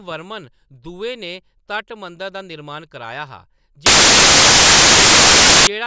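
The clip is speech. At 3.86 s it is cut off by a burst of very loud white noise that runs to 5.67 s, with hard edges at both ends. The fault is file tags played as audio. The player has read the embedded cover picture as if it were samples. Compressed image data looks random, so it plays back as loud, flat static. Roughly 1.8 s of the audio is lost this way.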